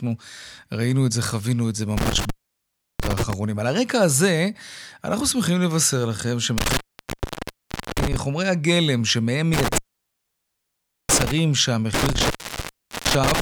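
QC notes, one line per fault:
1.97–3.33 s, 6.58–8.16 s, 9.54–11.32 s, 11.94–13.40 s: intermittent contact. The speech cuts out four times, for about 0.69 s, 1.2 s, 1.31 s and 0.76 s, as a loose plug or cable briefly breaks the signal path. Unlike a digital dropout, each gap is bracketed by crackle where the contact scrapes open and shut. The faint hiss during the gaps and the irregular gap lengths also point to a mechanical connection rather than lost packets or a buffer underrun.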